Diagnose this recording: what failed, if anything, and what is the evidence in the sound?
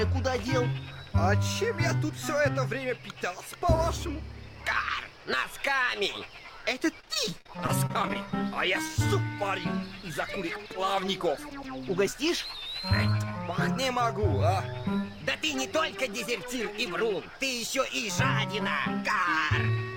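From 7.00 to 8.16 s the sound turns choppy and robotic, with small pieces missing in quick succession, none longer than about 42 ms. This is repeated packet loss on the network: each missing stretch is patched by extending the preceding sound, covering roughly a fifth of the span.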